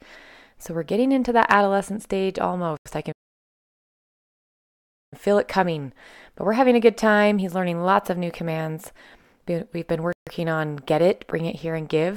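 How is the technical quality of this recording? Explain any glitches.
The speech is broken up by three dropouts where the sound cuts to silence and then resumes.

At 2.77 s the audio goes silent for about 86 ms, and at 10.13 s for about 142 ms. Each is a Bluetooth stall, likely from interference delaying wireless packets until the headphone buffer ran empty.

From 3.12 s to 5.14 s the sound stops mid-flow for a full 2 seconds before continuing. This is a playback stall, likely the player starving for data or its audio thread being blocked.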